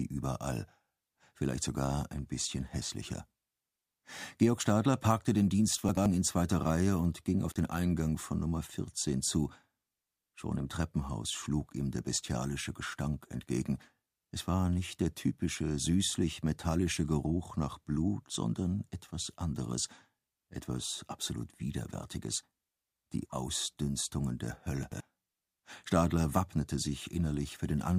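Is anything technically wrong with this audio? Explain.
Yes. At 5.89 to 6.06 s and again at 24.83 to 25.00 s, the sound briefly jumbles. These are chunks out of order: an 85 ms block played one chunk late, swapped with its neighbour. At 7.50 s, the sound drops out for about 40 ms with crackle at each edge and faint hiss in the gap. This is an intermittent contact, a loose cable or plug opening momentarily.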